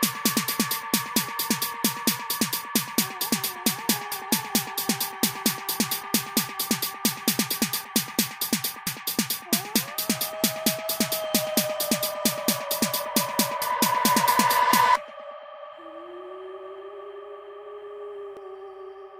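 The recording was most likely made in 5-second chunks, with a short stretch of audio dropped each time one chunk closed and the next opened, a case of audio missing between chunks. Roughly a third of a second disappears at each seam, and the two sides are butted together with no gap, so the sound jumps abruptly forward at 4.12, 8.87, 13.62 and 18.37 s, skips recurring at a steady interval of about 4.75 s.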